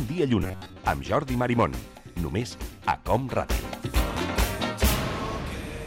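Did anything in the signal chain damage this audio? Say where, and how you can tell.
Yes. From 0.40 to 0.80 s the sound turns into a rigid metallic buzz at about 94 Hz, the robotic sound from repeated short buffers, most likely at the driver or buffer stage. Over most of that stretch, roughly 11 ms segments loop. The waveform shows near-identical repeating cycles, and the spectrogram shows an evenly spaced comb of harmonics.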